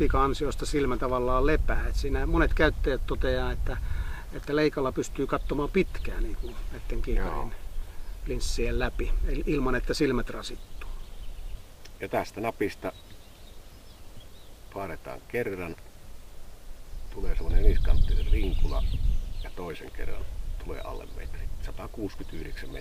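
From about 10.62 s through to the end, there's a crude rate conversion: the sound was resampled by just picking the nearest existing sample, repeating some, with no filtering. The ratio fits a jump from 32 kHz to 44.1 kHz. That uneven stepping adds a fizzy, inharmonic grit roughly 35 dB below the signal. It rides along with the louder and brighter moments and doesn't line up with any pitch in the material.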